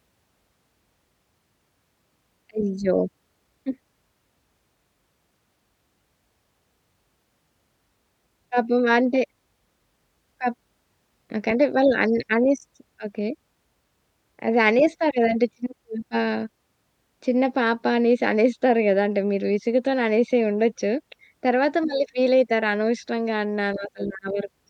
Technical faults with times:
none

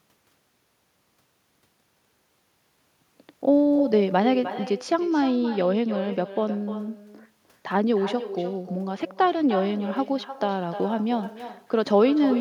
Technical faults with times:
0.00-12.41 echo with no canceller

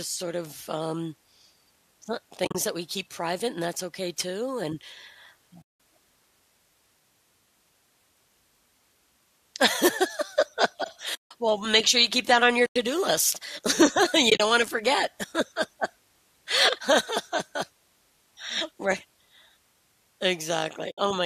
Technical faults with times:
2.44-2.55 AAC frame loss with muting
5.62-5.79 AAC frame loss with muting
11.14-11.31 AAC frame loss with muting
12.66-12.76 AAC frame loss with muting
14.29-14.40 AAC frame loss with muting
20.91-20.98 AAC frame loss with muting

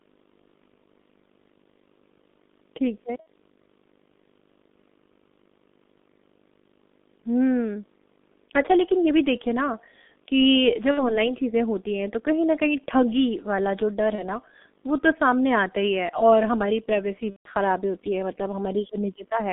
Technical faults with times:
0.00-19.52 video or display buzz
0.00-19.52 G.723.1 codec
3.20-3.28 VoIP packet loss concealed by the speech codec
10.91-11.27 VoIP packet loss concealed by the speech codec
14.15-14.23 VoIP packet loss concealed by the speech codec
17.30-17.48 VoIP packet loss concealed by the speech codec

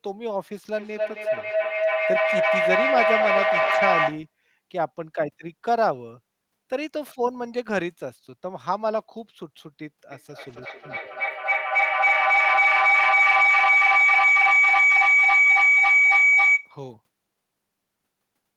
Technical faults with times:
0.76-4.33 feedback echo between two devices
3.61-3.75 lost packet rebuilt from error correction
10.12-16.82 feedback howl
10.49-10.59 lost packet rebuilt from error correction

